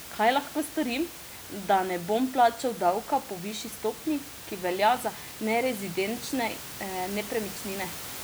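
No technical faults are audible in the speech; the only thing under it is the room's own background noise, about 14 dB down, which belongs to the recording rather than the system.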